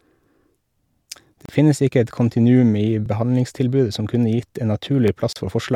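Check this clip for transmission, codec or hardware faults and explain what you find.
There are two kinds of fault here, each showing up twice in this speech clip.

Digital broadcast dropout at 1.46–1.49 s, just before "finnes ikke et kontinuum", and at 5.33–5.36 s: the receiver muted a failed frame, leaving a brief hole that sounds like a single lost frame of about 32 ms.

Overlapping chunks at 3.06–3.08 s and 5.08–5.10 s: each 2-second chunk starts early, so 20 ms replays at the join. You hear a little stutter-click.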